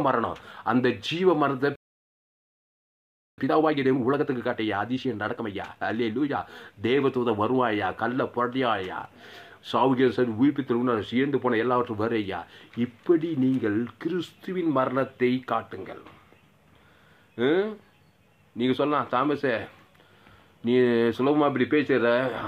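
A playback stall runs from 1.76 to 3.38 s: the sound cuts out mid-flow for about 1.6 s, likely because the player ran dry of data. Time-compressed catch-up follows from 3.38 to 6.38 s, where small pieces are trimmed and cross-faded, hurrying the audio about 1.25 times at normal pitch.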